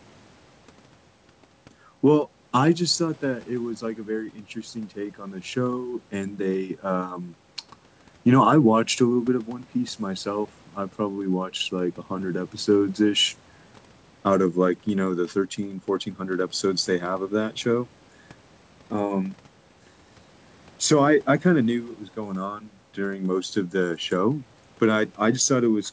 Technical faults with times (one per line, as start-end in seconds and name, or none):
none